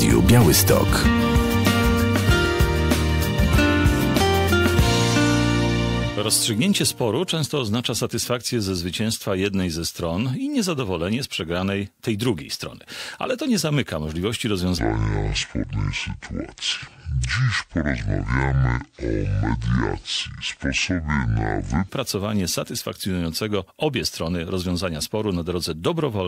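From 14.79 s to 21.89 s there is a section at the wrong speed. The audio drops abruptly to 0.571 times its proper rate, so everything runs slower and pitch falls by roughly ten semitones, a little under an octave, in the same instant. The shift reads as a likely clock mismatch, with that stretch played back against the wrong sample rate. At 21.89 s normal speed and pitch return just as suddenly.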